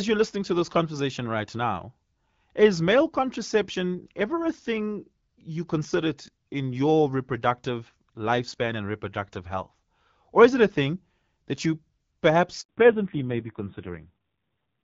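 At 12.61 s a handover gap opens: the call switched networks and no speech frames arrived for 80 ms, so the speech dies away and falls silent until the new link picks up at 12.69 s. Whatever was said in that window is gone.

From 12.69 s to the end, the call shows a fallback to narrowband. It left the AMR wideband (HD Voice) codec at 12.65 kbit/s, which had carried the speech with light coding damage, for AMR-NB at 5.9 kbit/s. Nothing above 4 kHz passes, so the speech turns duller and rougher.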